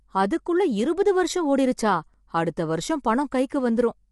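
Low-delay AAC compression, likely AAC-ELD at a rate that sounds like roughly 32 kbps, runs through the whole speech clip: short frames blur the pitch harmonics, leaving the voice rough and grainy with noise between them, and nothing above 11.6 kHz.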